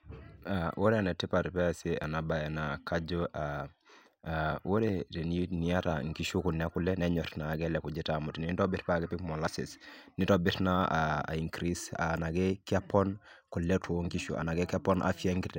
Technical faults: audio missing between chunks

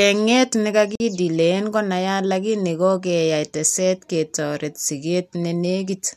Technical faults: gap at a join of encoded pieces

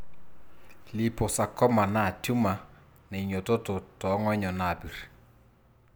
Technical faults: none

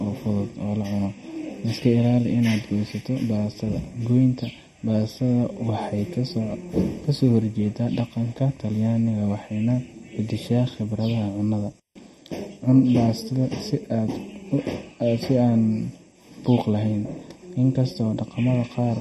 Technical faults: channel delay (comb filtering); MP3 compression; intermittent contact

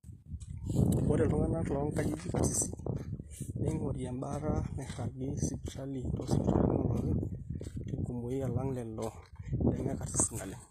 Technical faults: HE-AAC compression

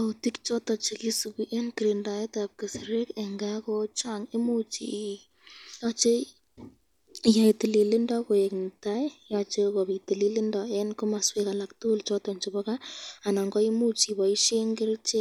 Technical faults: none

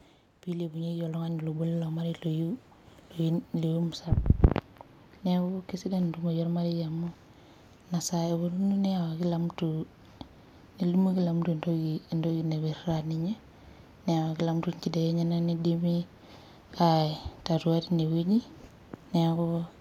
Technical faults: automatic gain rising

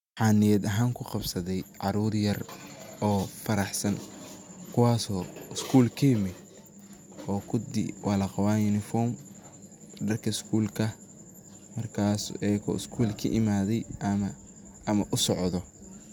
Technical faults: none

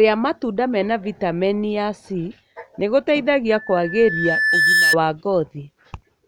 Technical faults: loudspeaker feedback squeal

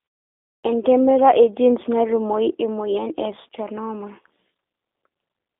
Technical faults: G.729 codec; clipped start after a pause

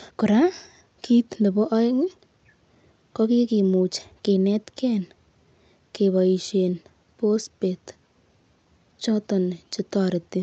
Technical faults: clock drift between sender and receiver; repeated timing corrections

